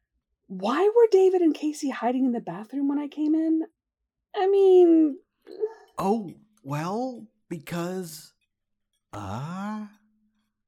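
Nothing stood out as a technical problem on listening.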